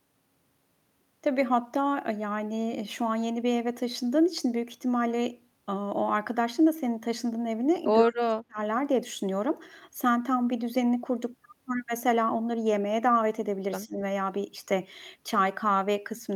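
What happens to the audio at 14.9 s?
At 14.9 s the speech carries on cleanly, with no dropout, click or other technical fault at that point.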